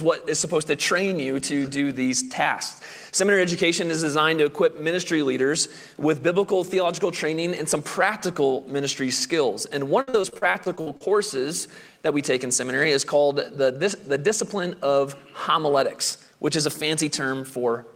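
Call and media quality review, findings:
Repeated packet loss (robotic sound), 10.01–11.1 s. Choppy stretch: eleven short gaps, longest 59 ms, about 340 ms missing. Jitter buffer/PLC repeatedly stretches the last sound over holes; roughly a third of the span is concealed.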